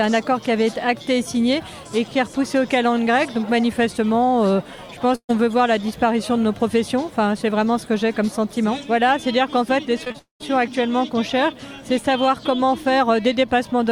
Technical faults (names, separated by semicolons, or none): burst of packet loss; repeated packet loss (robotic sound); long network dropout